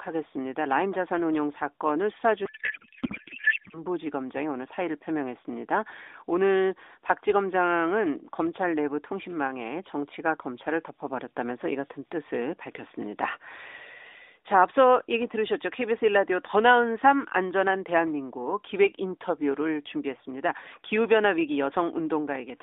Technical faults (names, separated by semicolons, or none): codec payload misread